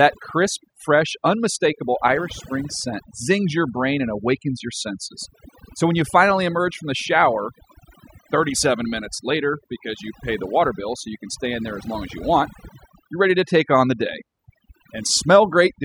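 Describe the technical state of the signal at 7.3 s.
At 7.3 s the speech carries overdone noise removal, present across the whole clip: frequency bands near the estimated noise floor are pulled down or switched off, taking quiet speech detail with them. The result is a lowered background that breaks up into twinkling specks. A spectrogram shows scattered isolated dots and gaps between harmonics.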